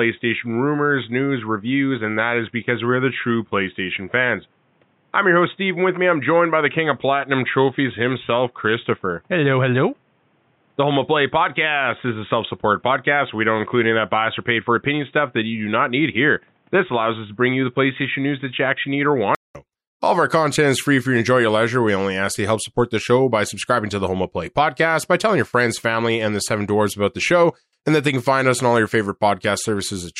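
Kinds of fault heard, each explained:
Input switched to a poorer device: boxy speech with nothing above 3.8 kHz, then a 200 ms gap at 19.55 s and it opens up, likely a narrowband mic dropped.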